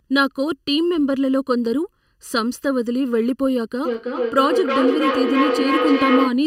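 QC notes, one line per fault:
Throughout: channel delay (comb filtering). One channel trails the other by under a millisecond; summed to mono, cancellations start near 700 Hz, leaving speech hollow and phasey.
3.85 to 6.45 s: feedback echo between two devices. A second device replays the call into the microphone, returning speech roughly every 300 ms at about 0 dB, so repeats pile up.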